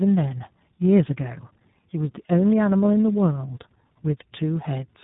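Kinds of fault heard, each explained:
Tandem speech coding: the speech sounds like it went through two low-rate speech codecs back to back, fitting a GSM full-rate leg feeding iLBC, the second re-coding the first's damage. It comes out rough, warbly and dull, with nothing above 3.8 kHz throughout.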